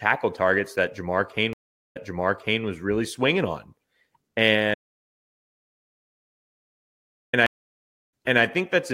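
At 1.53 s the speech stream's connection breaks and the player reconnects, a stream reconnect that starts a fresh decoder mid-stream. About 0.42 s of silence follows, and playback resumes about 0.68 s earlier than where it stopped, because the server resent buffered audio. The listener hears a gap and then a repeated stretch leading into "was really swinging on", with the disturbance settling by 2.63 s.

From 4.74 s to 7.33 s the input signal is lost while the recorder keeps writing silence, likely from a disconnected source or failed link. This audio dropout to silence cuts the speech off abruptly and leaves 2.59 s of silence with no room tone. Whatever was said in that span is missing.

A second stream reconnect follows at 7.46 s. The player goes quiet for about 0.66 s, rejoins about 0.31 s behind its previous position, and briefly repeats audio before recovering by 8.44 s.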